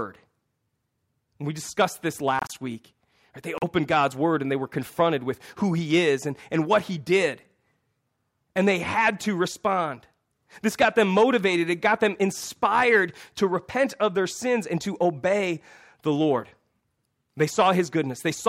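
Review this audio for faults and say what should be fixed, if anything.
Corrupt frame decoded, at 2.39 to 2.50 s and 3.58 to 3.64 s: damaged compressed frames were played as if valid, so misread gains and codes scattered energy across wrong frequencies. The result is a short, fairly loud chirp-like burst spanning a few frames each time. Protecting the stream with checksums, and concealing frames that fail them rather than decoding them, would prevent this.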